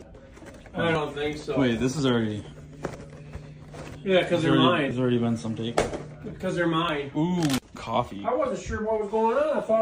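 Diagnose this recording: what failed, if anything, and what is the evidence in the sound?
Overlap between stream segments at playback: tiny skips at 0.95, 4.91, 6.89 and 7.87 s, each losing a few milliseconds (about 5 to 14 ms). The spacing fits 1-second segments. Overlapping time stamps made the player discard real audio, so the waveform jumps at each boundary.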